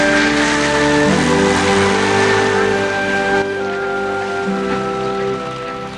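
At 3.42 s the level falls abruptly by about 6 dB and stays down until the clip ends, with no other change to the sound's tone or character. The likely cause is one channel drops out. When one of two stereo channels is lost, the mono sum keeps only half its contribution. With matching content in both channels, that is exactly a 6 dB step, so the missing side shows up as a sudden, sustained loss of loudness.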